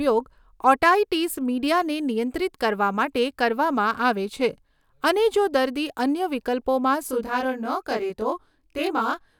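Speech clip: from 7.07 s, after "અન્ય વિકલ્પોમાં", channel delay (comb filtering) makes it rough and slightly doubled to the end. One channel lags roughly 20 ms, so the mono sum has fixed notches spaced from around 20 Hz, unlike a flanger's sweeping ones.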